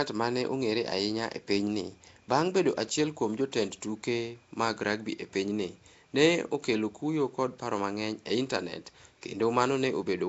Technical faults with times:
0.00-10.28 Nellymoser compression

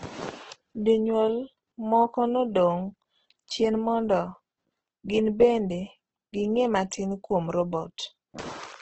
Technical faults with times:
0.00-8.81 Opus compression

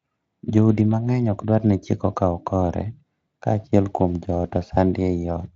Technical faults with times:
none

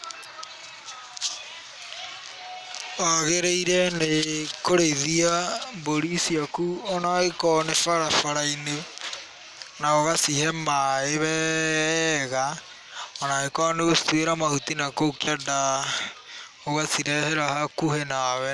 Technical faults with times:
none

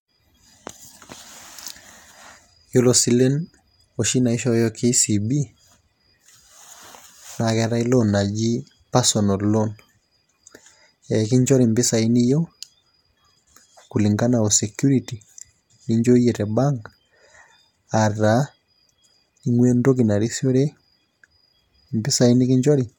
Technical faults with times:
none

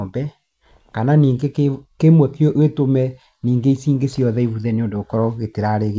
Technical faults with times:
none

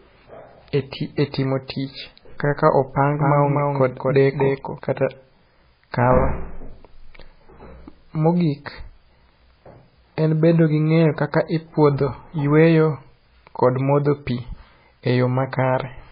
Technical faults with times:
0.00-16.11 MP3 compression
3.13-4.79 doubled audio track

